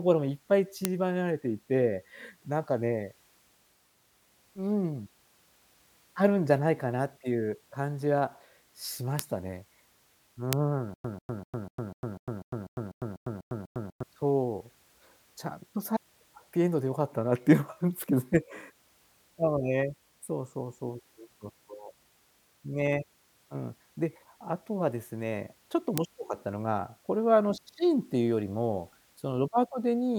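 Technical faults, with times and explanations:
0.85 s, 9.19 s, 10.53 s and 25.98 s, bit error spike: each is a single hard tick, bright and spread evenly across the spectrum, with no relation to the speech around it. A flipped bit in one sample (two adjacent samples at 10.53 s) throws the waveform value off by a power of two and lets it snap straight back, so the ear gets an instantaneous click.
10.94 to 14.03 s, stutter with silent gaps: a fragment of about 143 ms repeats 12 times, each followed by about 103 ms of dead digital silence, giving a steady cycle of roughly 247 ms. The likely cause is a stalled player or stream that replays its last buffered chunk on every retry and then runs dry, so the speech that belonged in those three seconds never arrives.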